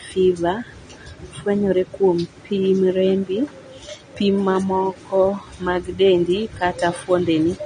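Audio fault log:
Throughout: AAC compression, likely; speech dull with nothing above 9.6 kHz, plus warbling, fizzy sibilants, fitting a bitrate near 32 kbps; a plain low-pass would not warble.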